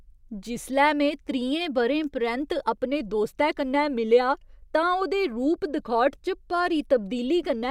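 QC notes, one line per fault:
No faults found in this speech recording.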